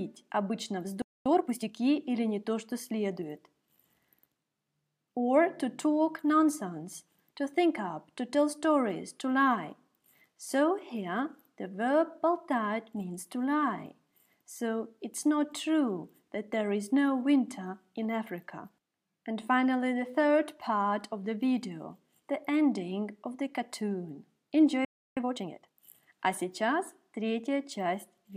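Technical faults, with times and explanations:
1.02–1.26 s and 24.85–25.17 s, playback stall: the sound cuts to silence mid-flow for about 0.24 s, then about 0.32 s, and resumes. The likely cause is the player running short of buffered data or its output thread being held up. Unlike a dropout or packet loss, the gap is a clean, fairly long silence with no clicks, noise or smeared fill.
1.26–1.72 s and 25.17–25.79 s, time-compressed catch-up: straight after each stall the audio runs about 1.5 times faster while keeping its normal pitch. The player is working off the backlog the stall left by cutting out short slices and cross-fading the joins. That keeps pitch steady, so this is hurried audio rather than the raised pitch of a simple speed-up or a sample-rate mismatch.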